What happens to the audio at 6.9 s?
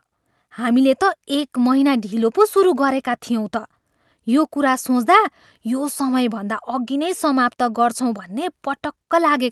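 Nothing goes wrong at 6.9 s: the speech there passes through the call path intact, with only the ordinary band limit of that connection.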